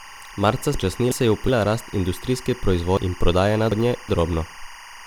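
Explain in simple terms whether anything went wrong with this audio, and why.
A steady chirping warble runs behind the speech for the whole clip. This is timecode bleed: a timing signal leaking in, flipping between pitches around 1 and 2 kHz, unlike a hum's single drone.

The speech also jumbles twice. These are chunks out of order. A 0.37 s piece plays late between 0.74 and 1.49 s, and another plays two places late between 2.97 and 4.09 s. Unlike a dropout, nothing is missing; the pieces are just shuffled.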